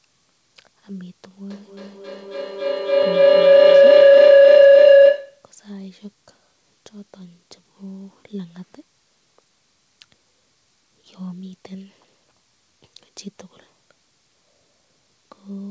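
From 1.5 to 5.52 s, a feedback howl builds in the speech. Sound from a loudspeaker re-enters a microphone in the same room and gains level on each pass. It narrows to a tone near 500 Hz. It repeats roughly every 300 ms. It peaks about 24 dB above the speech.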